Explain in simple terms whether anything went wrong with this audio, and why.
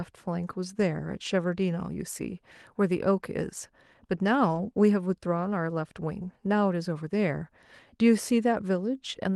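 Lost packets rebuilt from error correction occur at 4.51 to 4.57 s and again at 5.49 s. On the way through the call connection, small chunks of the audio went missing. Each following chunk carried a rough backup copy of the one before, so the receiver played those copies instead of leaving silence. The first spot sounds like about two chunks patched together, and the second like a single one. Both moments sound rougher and noisier, with no gap.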